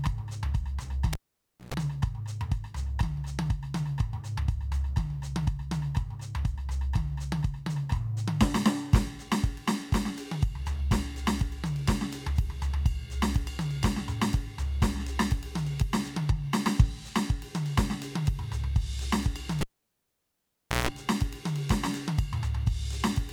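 A live cable was pulled and plugged in twice during this music clip, at 1.13 to 1.74 s and 19.61 to 20.89 s: each time a pop drops the music to near silence for about 0.56 s and 1.23 s, then a 60 Hz mains buzz of about 120 ms and 160 ms precedes a second pop.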